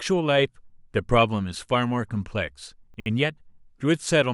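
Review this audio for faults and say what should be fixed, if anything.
A brief jumbled stutter at 2.94 to 3.06 s comes from chunks out of order. One 60 ms chunk arrived a chunk late and played after its successor, leaving three hard joins. Reordering buffered chunks by sequence number before playback prevents this.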